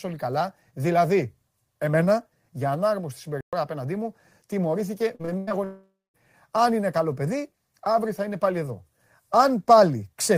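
At 3.41 s, right after "δηλαδή εμένα για ανάρμοστη", the speech just stops dead for about 120 ms and then carries on with "απέναντί μου τιμωρήθηκε" as if nothing happened. That's a playback stall. The most likely explanation is that the player ran dry or its thread got held up briefly, so the output went quiet until it caught up. You hear it as a short, unnatural hitch in the middle of the flow.

Shortly after that same phrase, from 5.15 to 5.52 s, there's a choppy patch. That's repeated packet loss. Four separate holes land in under 0.4 s, about 180 ms of audio goes missing, and the longest gap is 94 ms. Each hole gets papered over by stretching the previous sound, so nearly half that stretch is synthetic fill. That's why it comes across as choppy, with bits of speech clipped out.

Then from 5.64 to 6.16 s comes a long network dropout, about half a second of audio that never makes it. 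It most likely happened because nothing arrived over the network for that stretch. The receiver keeps extending the last sound as a buzzy tail that fades away, and the final 0.22 s or so drops to silence. When the speech returns, it picks up further along, and the lost part is simply gone.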